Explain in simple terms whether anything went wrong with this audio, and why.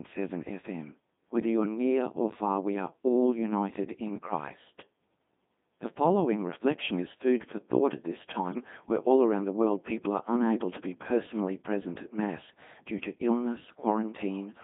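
Yes. The whole recording went through a Codec 2 vocoder, which rebuilds speech from a few measurements, so it sounds robotic and buzzy throughout. Between 8.52 and 8.64 seconds, after "for thought at this" and before "where all around the", bit errors on digital voice radio scrambled that brief stretch into a warbling, garbled burst.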